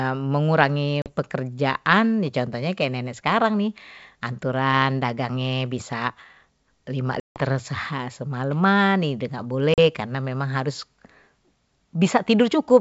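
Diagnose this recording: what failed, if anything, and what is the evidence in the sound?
Network stage, packet loss on an ADPCM call: hard-edged silent gaps at 1.02 s and 9.74 s (40 ms each) and 7.20 s (160 ms) show as blank spectrogram columns and flat waveform. The decoder's predictor and step size then mismatch the sender's, so speech returns slightly distorted.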